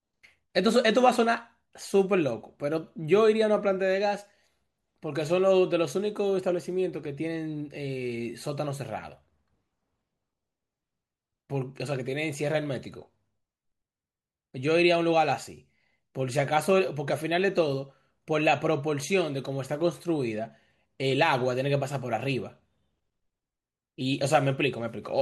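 No technical faults can be heard anywhere in the recording, and the speech signal stays continuous and stable throughout.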